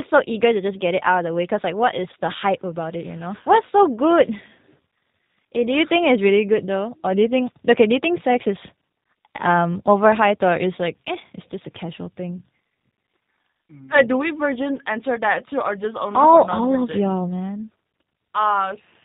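The speech sounds narrow and muffled, with nothing in the upper treble, and has a slightly rough, synthetic, buzzy quality that is plainly audible from start to finish. This is G.729 codec damage: the voice has been rebuilt from a vocal tract filter, a pitch predictor and a few coded pulses per short frame, which fits a narrowband 8 kbit/s G.729A stream that discards everything above 4 kHz.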